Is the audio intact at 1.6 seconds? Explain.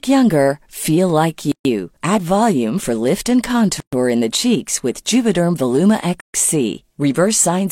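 No. At 1.6 seconds the speech falls inside a gap at a join of encoded pieces, running from 1.52 to 1.65 s, right after "younger feel like". The gap lasts about 133 ms. It fits two separately encoded segments spliced without trimming, so the encoder's start-up delay and the padded final frame both remain in the stream. Sound cuts out abruptly, with smeared edges, then resumes exactly where it stopped.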